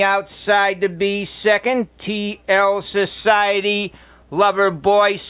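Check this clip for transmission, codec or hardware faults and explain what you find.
Nothing in the clip points to a transmission, codec or hardware fault. No dropout, glitch or other defect stands out anywhere in it.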